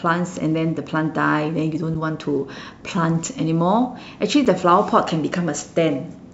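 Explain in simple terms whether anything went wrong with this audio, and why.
The speech was delivered in pieces about 2.5 seconds long, and a tiny silence, about 7 milliseconds, was left where the pieces join. This gap between chunks sounds like a brief dropout at 1.94 s and again at 4.45 s.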